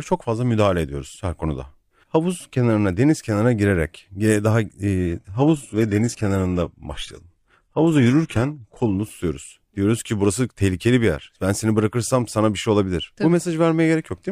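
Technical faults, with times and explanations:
4.98 to 8.98 s, adaptive stream at a lower bitrate: the speech suddenly loses its top end, with nothing above 12.3 kHz. This fits a switch from roughly 96 kbit/s AAC to 16 kbit/s HE-AAC. Unlike a dropout, there is no gap.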